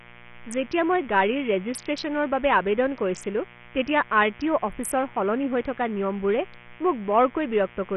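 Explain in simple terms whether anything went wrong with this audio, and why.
Two things went wrong, and both last the whole recording. First, mains buzz: electrical interference from the power supply, running at 60 Hz, leaked into the recording chain. You hear it as a steady, raspy buzz sitting fairly low under the speech from start to finish.

Second, heavy Bluetooth SBC compression, most likely from sending the audio over a low-quality Bluetooth link, throws away much of the detail to save data. Nothing remains above about 14.4 kHz, so the speech sounds dull on top, with a gritty, grainy edge throughout.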